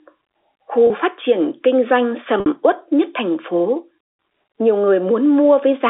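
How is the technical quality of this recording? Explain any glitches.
Two brief dropouts interrupt the speech, both caused by packet loss with pitch repetition. The first runs from 0.87 to 0.90 s, a 30 ms gap consistent with one lost packet. The second runs from 2.40 to 2.46 s, a 60 ms gap that fits two. In each gap, the receiver repeats the last pitch period and fades it out over about 50 ms. The short gap comes across as a slightly held, buzzy tone. The longer one fades into silence before speech returns through a quick cross-fade. The narrow telephone band of the G.711 line is audible throughout.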